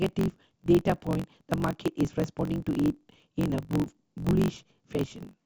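Speech runs throughout about 1.12 times too fast at roughly normal pitch, under a steady 46.9 Hz buzz. This is a truncating block size mismatch: the end of every block is discarded, consistent with a 1024-sample read size.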